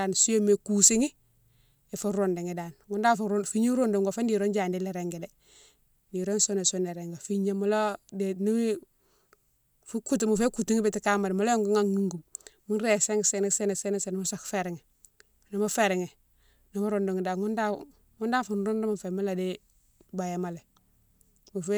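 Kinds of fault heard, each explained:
No technical faults can be heard in this speech recording. There is nothing to list for any kind of fault.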